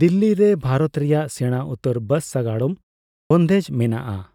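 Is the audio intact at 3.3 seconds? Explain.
No. At 3.3 seconds the speech is still inside a clipped start after a pause, running from 3.21 to 3.31 s. About 95 ms of sound is missing there. A pause of about 0.46 s comes just before it. During that gap the output device went idle, and it needed time to wake and lock again. So the speech resumes abruptly out of silence, without its opening sounds.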